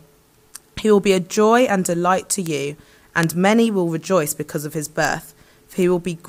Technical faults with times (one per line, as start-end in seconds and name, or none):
1.37 bit error spike
2.46 bit error spike
3.23 bit error spike
5.05 bit error spike
5.82 bit error spike